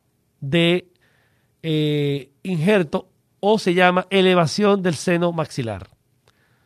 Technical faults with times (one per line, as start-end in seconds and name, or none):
0.00-6.66 clock drift between sender and receiver
0.25-6.33 repeated timing corrections